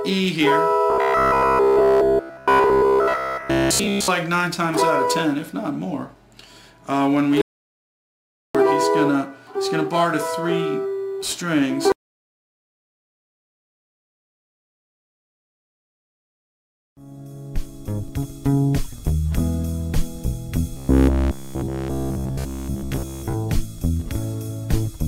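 From 0.90 to 4.08 s, new audio is likely arriving too seldom, so the playback path keeps looping the last short buffer instead of moving forward. Essentially the whole stretch is made of these repeats, and the real material in between is skipped. Each repeat lasts about 15 ms, which stamps a steady 66.7 Hz buzz onto the sound. The result is robotic sound from repeated short buffers: a rigid, metallic drone that only loosely tracks the original.

At 7.42 s the input likely drops out, with the device or link going away while the recorder keeps writing silence. This audio dropout to silence lasts 1.13 s, until 8.55 s. The sound stops abruptly in mid-flow and then resumes just as abruptly. The gap is silent with no room tone, and whatever happened during it is lost.

From 20.77 to 23.35 s the same buffer starvation likely returns. Again nearly all of the stretch consists of repeated buffers of about 15 ms, and the same 66.7 Hz metallic buzz replaces the natural character of the sound until it clears.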